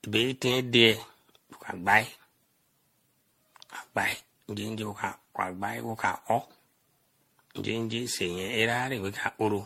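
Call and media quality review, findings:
Generation loss, throughout the speech. Swirly, hollow, smeared texture; consonant attacks blurred; nothing above 16.5 kHz. Likely repeated MP3 re-encoding, about ten passes, each pointing to roughly 64 kbit/s, each requantising on a shifted frame grid so noise and spectral holes pile up. Tell from a single low-bitrate encode: the damage is worse than that bitrate alone would give.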